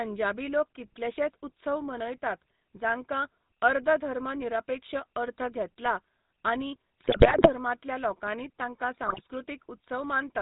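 The whole clip has passed through the GSM full-rate codec, which fits the 13 kbps original GSM coder. It rebuilds the speech from a vocal-tract filter driven by a sparse, regularly spaced pulse train, and nothing above 4 kHz survives. The result is a plainly audible buzzy, gravelly roughness over the speech from start to finish, with the top end dulled.

From 7.00 to 7.49 s, just before "लोकांनी तांकां", GSM bit errors corrupt a run of frames. Damaged filter, pitch and gain values make the spectrum warp and the level jump frame by frame, so the speech breaks into squawks, pops and gargling. A second, shorter burst follows from 9.06 to 9.21 s, right after "लोकांनी तांकां", with the same garbled squawking over a handful of frames.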